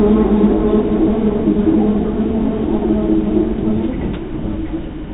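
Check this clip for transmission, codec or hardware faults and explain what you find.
The sound arrives intact through the call path, its content stopping at 4 kHz in the way the narrowband telephone coding of that path, which fits G.711 mu-law, normally leaves it, and nothing in it departs from what that path ordinarily delivers.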